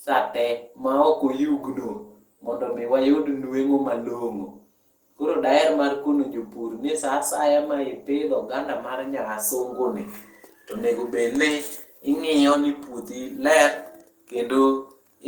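Nothing in this recording trips a technical fault at any point, so there's no timeline of problems to walk through here.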